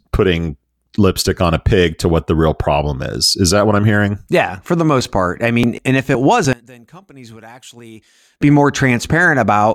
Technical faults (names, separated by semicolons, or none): one channel inverted